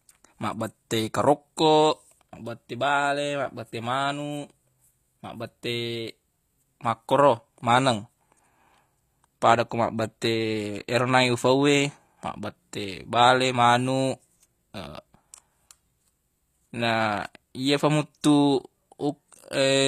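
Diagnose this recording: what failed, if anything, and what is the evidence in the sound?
The failure is at the codec stage and runs through the whole speech clip: plainly audible coding damage, with nothing above 14.9 kHz. The treble that is present sounds rebuilt rather than captured, which points to HE-AAC compression at a low rate, likely around 24 kbps. The codec carries only the lower spectrum and regenerates the top by copying lower bands upward under a coarse envelope, so harmonics fail to line up across the crossover.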